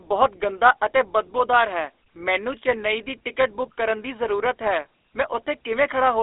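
A buzzy, gravelly roughness runs through the speech from start to finish, with a thin, boxed-in tone that carries nothing above about 3.8 kHz and sits within a telephone band of roughly 300 Hz to 3.6 kHz. This is plainly audible GSM full-rate codec damage, at a rate that fits 13 kbps. The codec models the vocal tract and drives it with a sparse train of regular pulses. That coarse excitation produces the grainy buzz, and the narrow band removes the upper frequencies entirely.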